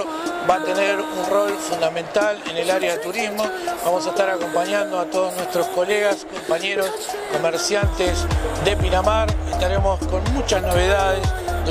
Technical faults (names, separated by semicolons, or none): none